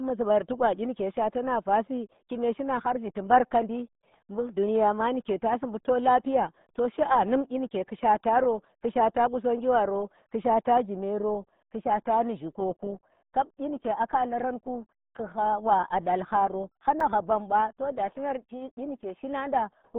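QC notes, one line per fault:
Throughout: RealAudio 14.4 codec, an 8 kbit/s dial-up speech codec discarding everything above about 3.8 kHz, leaving the speech muffled, band-limited and gargly.
17.00 s: block of digital silence, output briefly zeroed between "wa dall haro" and "hha bamba to du"; the abrupt cut and return give a single tick.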